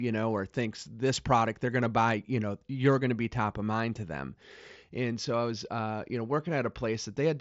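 There are no technical faults to describe in this speech, which comes through a Bluetooth mSBC headset link with nothing heard above about 7.7 kHz.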